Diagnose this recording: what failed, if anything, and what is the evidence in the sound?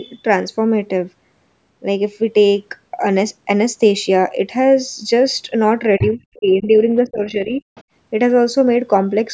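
The failure sits in the call processing. There's other side's voice leaking through: a second voice at 5.99 to 6.15 s, close to the talker's level, then faint scraps around 6.34 to 6.39 s and 7.75 to 7.83 s. Most likely the echo canceller left part of the loudspeaker pickup in the microphone signal.

Right where the two voices overlap, you get speech suppressed in double talk. The talker drops hard, something like 30 dB at its deepest, from 5.99 to 6.81 s, and dips again by about 15 dB from 7.03 to 7.62 s. The canceller likely couldn't separate the two voices, so it turned the whole signal down. The band-limit at 8 kHz is just the call's normal processing.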